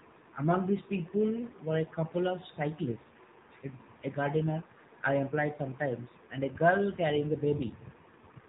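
A speech clip carrying AMR narrowband mobile codec damage from start to finish. Nothing above 4 kHz survives, and the voice has a buzzy, synthetic edge where the codec rebuilds it from a vocal-tract model fed by sparse pulses, which fits a low AMR-NB mode around 7.4 kbps. That modelled buzz sets it apart from a simple telephone band-limit, which dulls the top end but leaves the remaining voice natural.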